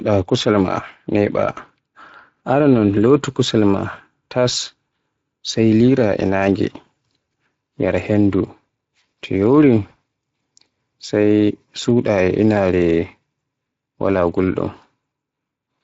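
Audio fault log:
throughout, Speex codec: The speech has a hoarse, grainy edge. The CELP encoder has too few bits to model the excitation, which fits a bitrate of about 20.6 kbps, so the codec damage is plainly audible.
9.89 to 9.93 s, VoIP packet loss concealed by the speech codec: The voice is briefly stretched, then dips. About 20 ms of audio went missing, and the decoder filled the gap by repeating its last pitch and filter at falling gain, so the recovery carries residual distortion.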